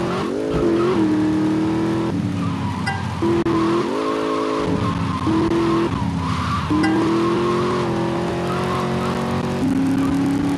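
From 8.43 s to the end, the audio carries a filter restarted on every block. The filter drops its stored state at each block boundary and starts again from zero, so every block opens with a short transient. These transients repeat at about 43.1 Hz, heard as a low buzz or rapid ticking under the sound that rises and falls with its level. That rate fits a 1024-sample block.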